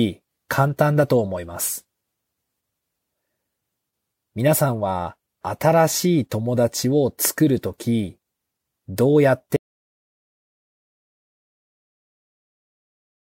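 At 9.56 s the speech cuts off abruptly in an audio dropout to silence that lasts to the end, 3.8 s. The input was likely lost, so silence was written: the waveform goes dead flat and the spectrogram turns blank, with no room tone.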